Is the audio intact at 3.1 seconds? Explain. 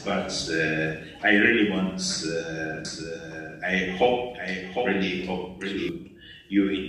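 No. From 2.85 to 5.89 s a second copy of the full-band sound trails the original by roughly 0.7 s, about 5 dB quieter, with no decay or room colour, and it starts and stops abruptly. This doubled audio track likely comes from a slower second capture path or an edit holding two copies out of step.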